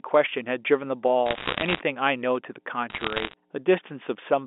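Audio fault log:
throughout, mains hum: A steady low tone at 60 Hz sits under the speech the whole way through, about 35 dB below it, faint but constant in the pauses, with a little buzz from its low harmonics. That points to the power line leaking into the signal, through a ground loop or a transformer near the cabling. It sits below the narrow phone band of roughly 250 Hz to 3.6 kHz as a thin drone.
1.26–1.80 s and 2.90–3.33 s, bit errors on a digital phone line: Two bursts of sharp ticks and crackle ride over the speech, which keeps its shape underneath. The ticks come from corrupted bits on the G.711 mu-law line, at a rate of roughly 1 to 1.5 percent. Each error changes a single 8-bit sample, and a hit on a high-order bit, or on the sign bit of a loud sample, throws that sample far off, giving a click. The first burst is denser.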